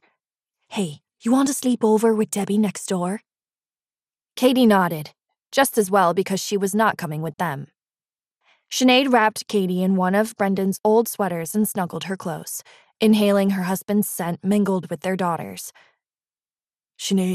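From start to finish the audio carries plainly audible MP2 compression damage. The top end sounds dull and sits on a granular, gurgling texture, with upper frequencies flickering in and out rather than holding steady. The likely cause is MPEG Layer II coding at a low rate, around 80 kbps, where too few bits leave whole upper sub-bands switched off and the bands that remain coarsely quantised.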